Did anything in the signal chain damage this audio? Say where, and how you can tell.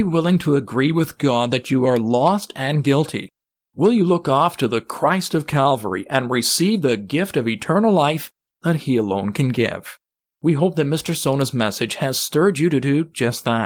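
No, the signal chain shows no damage: the speech keeps its full bandwidth, and the Opus voice compression it passed through, which sounds like hybrid fullband coding at a moderate bitrate, leaves only the light coding texture expected at that setting.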